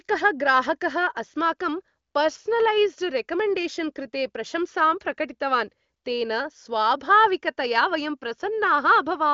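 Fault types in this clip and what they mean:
No faults can be heard in this speech clip.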